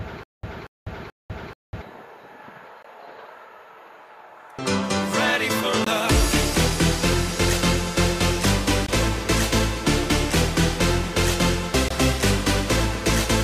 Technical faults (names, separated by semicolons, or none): stutter with silent gaps; gap between chunks